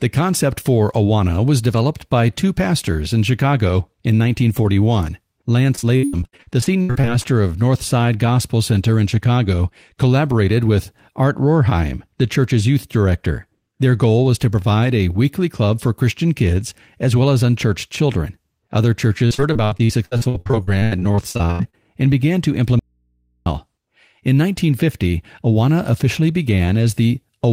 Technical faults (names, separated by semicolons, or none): repeated packet loss (robotic sound); audio dropout to a faint residue